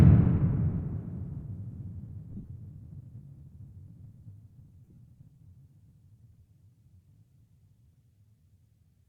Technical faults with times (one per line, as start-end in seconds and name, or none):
2.32-2.48 lost LE Audio frames
4.84-4.98 lost LE Audio frames